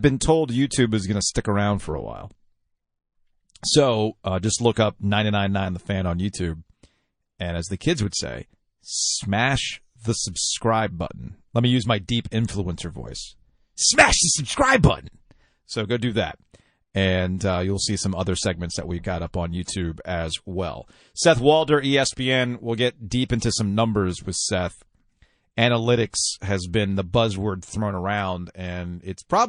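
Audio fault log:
throughout, MP3 compression: the whole clip has a clearly audible watery, swirly quality, with metallic chirps on s sounds. That's likely a low-bitrate MP3 encode, and the damage level fits something around 40 kbps. The encoder runs short of bits, so it drops the treble and zeroes weak frequency lines, which flicker on and off from frame to frame.
4.74, 8.10, 10.32, 19.64, 23.39 and 26.10 s, pre-echo: each sharp attack is preceded by a brief hiss lasting 20 to 33 ms, about 12 to 20 dB above the surrounding floor. Examples are between "as the kids" and "say smash the", after "we've got up on", and after "will get deep". The noise fills a whole long block, which points to roughly 52 ms blocks with no switch to short ones, so it leaks ahead of each attack.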